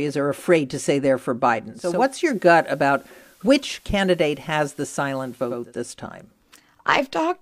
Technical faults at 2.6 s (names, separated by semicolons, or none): digital radio blending to analogue